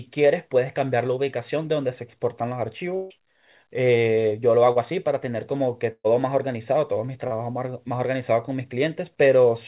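At 2.96 to 3.13 s and 5.92 to 6.07 s, a burst of packet loss: 120 to 150 ms of audio never arrives. The last sound is stretched into a fading buzz or hiss, and the second gap falls to about 50 ms of silence. At 4.72 and 7.27 s, short concealed packet loss lasts only about 30 ms. Each is a brief smear that blends back without a gap, unlike the longer held bursts. The narrowband call audio has nothing above 4 kHz.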